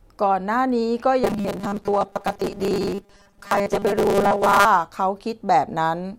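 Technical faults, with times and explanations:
1.24–4.66 s, robotic sound from repeated short buffers: the speech becomes a rigid, metallic buzz at a fixed 200 Hz that only loosely tracks the words, likely because audio arrived too slowly and a 5 ms slice kept repeating in place of most of the real signal.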